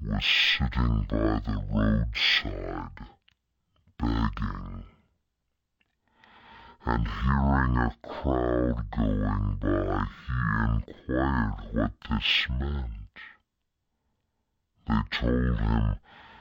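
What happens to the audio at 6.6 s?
Stereo read as mono is present at 6.6 s, as it is across the whole clip. Interleaved left and right samples are played back as one channel, so the speech runs at half speed and drops a full octave, 12 semitones low, with a fainter mirrored copy in the upper spectrum.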